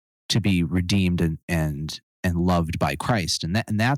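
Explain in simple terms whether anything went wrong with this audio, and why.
Several stretches sound harsh and crackly, with the loudest parts of the speech frayed and gritty: 0.35 to 1.23 s, 1.52 to 1.55 s, 2.25 to 3.14 s, and 3.55 to 3.93 s. That is microphone overload, likely from the input being set so high that the tops of the loudest peaks were chopped off.

At about 3.11 s the whole sound suddenly gets a bit quieter, right near the end of a crackly stretch. That is the microphone volume being stepped down, likely the call software noticing the overload and turning the input level down in a single jump.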